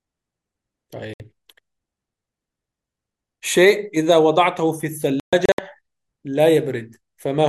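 Digital broadcast dropouts at 1.14 s and 5.20–5.59 s: the receiver muted on bad frames, leaving clean silent holes where material vanishes rather than stuttering or repeating.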